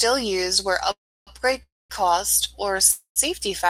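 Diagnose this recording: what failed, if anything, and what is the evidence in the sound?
A call audio freeze at the network stage breaks the speech three times: 0.91–1.30 s just after "used where", 1.63–1.93 s and 2.92–3.19 s. Each starts with a brief held-over fading buzz and then falls silent for roughly 0.1–0.3 s. Delayed packets likely let the jitter buffer run empty. Unlike packet loss, the speech resumes exactly where it stopped, so nothing is missing and only a gap of 0.24–0.35 s is inserted.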